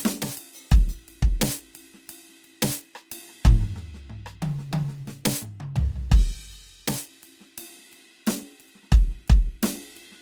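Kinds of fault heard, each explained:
Opus compression: tones sound rough, grainy and noisy throughout, likely from Opus music-mode coding at a low rate fitting about 24 kbps.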